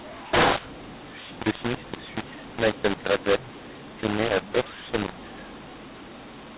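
A mu-law and A-law mix-up runs throughout: mu-law telephone samples read back as A-law scramble levels, making the speech harsh, distorted and noisy in pauses.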